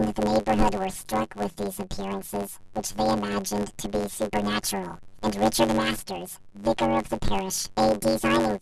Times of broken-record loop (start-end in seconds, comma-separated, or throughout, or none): none